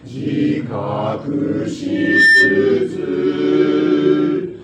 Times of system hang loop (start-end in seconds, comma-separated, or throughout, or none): none